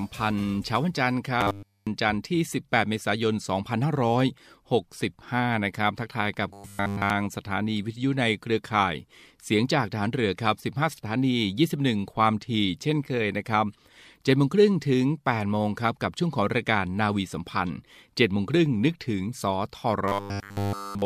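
Speech with robotic sound from repeated short buffers at 1.41–1.87 s, 6.53–7.10 s and 20.08–21.05 s: a rigid, metallic 100 Hz buzz replaces nearly all the audio. The likely cause is starved input, with a 10 ms buffer looped in place of skipped audio.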